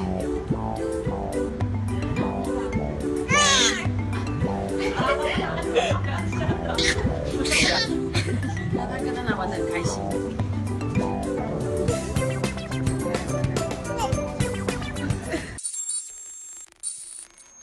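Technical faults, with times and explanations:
4.97–5.03 s and 11.34–11.40 s, compressed frames skipped: a few compressed frames went unplayed, so the audio jumps ahead roughly a fifth of a second at each short join.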